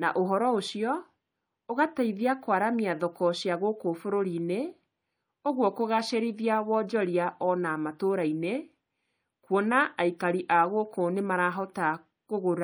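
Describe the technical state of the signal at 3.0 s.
At 2.99 s there is a corrupt frame decoded. Damaged bits in a single compressed frame were played anyway. Misread gains put energy at the wrong frequencies for that frame's length. The result is a brief, faint blip or chirp.

Around it, the speech shows plainly audible MP3 compression. Weak detail swirls in and out between frames. Sibilants turn metallic. That is likely from encoding at a low bitrate, about 64 kbps.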